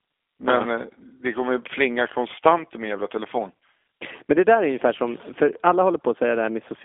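From start to finish the speech carries G.729 codec damage, and it's plainly audible: a rough, slightly synthetic edge from frames rebuilt out of a vocal tract filter, pitch prediction and sparse pulses, which fits an 8 kbit/s G.729A link. The band sits around 250 Hz to 3.5 kHz, with nothing above 3.6 kHz.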